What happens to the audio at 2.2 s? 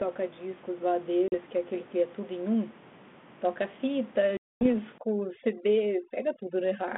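Nothing goes wrong at 2.2 s: the speech there carries only the faint room noise sitting about 21 dB below it and the light, narrowband coloration of the G.726 telephone coding, with no fault at that moment.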